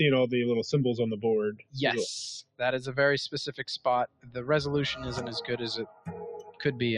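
A noise suppressor applied to music or sounds runs through the whole clip. It treats steady tones and tails as noise. The level swings by around 10 dB as it clamps and releases. Attacks pass while sustains thin and pump.

Sound cut by the noise suppressor appears at 1.52–1.77, 2.43–2.61, 3.49–3.86, 4.07–4.43, 5.86–6.08 and 6.42–6.61 s. Here held or fading sound sinks harder, by up to about 17 dB. Decays are chopped short and briefly hollow out.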